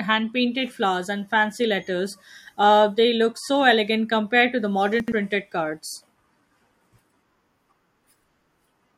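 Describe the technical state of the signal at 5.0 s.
At 5.0 s the chunks are out of order. One 40 ms chunk reached the output late and played two chunks after its proper place, so the stretch from 5.0 to 5.12 s runs in the wrong sequence. No audio is lost, but the rearranged pieces meet at three hard joins. The speech there sounds briefly garbled and jumbled.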